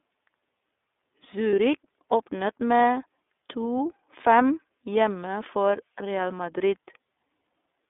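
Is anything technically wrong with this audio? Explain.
Yes. The speech has been through the iLBC codec throughout, and there is one short packet loss.

iLBC codec: the audio occupies only about 250 Hz to 3.6 kHz, which sounds thin and telephone-like. Each frame's excitation is coded independently at a low rate, so the speech is plainly rough and slightly synthetic. This fits the 13.33 kbps, 30 ms frame mode.

Lost iLBC frames: from 1.50 to 1.53 s, a 30 ms gap, consistent with one dropped frame. The decoder filled it by repeating the last pitch cycle mixed with noise, giving a brief held, faintly buzzy vowel before normal speech resumes immediately.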